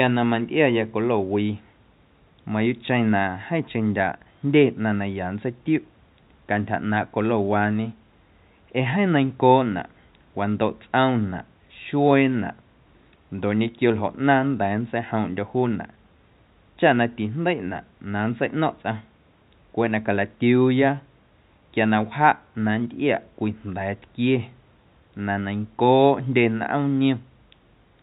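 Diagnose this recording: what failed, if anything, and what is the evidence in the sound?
Nothing in the recording points to a failure at any stage, from capture through to playback. The call path sounds as a narrowband telephone link should, with no content above 4 kHz, and the room's background noise sits about 39 dB below the speech.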